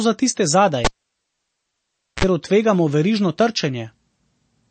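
It's a short speech clip with two problems. Throughout, nothing comes through above 8.4 kHz, and the audio has a plainly audible watery, swirly quality with smeared consonants. That's likely MP3 compression, and the damage points to a low bitrate of around 32 kbps, where the encoder runs short of bits, cuts the treble and lets weak frequency lines flicker on and off. Then there's a cable pulled and plugged in between 0.85 and 2.24 s. It starts with a pop and near silence for about 1.35 s. Next comes a 49 ms burst of 60 Hz mains buzz while only the tip is making contact, and another pop as the signal comes back.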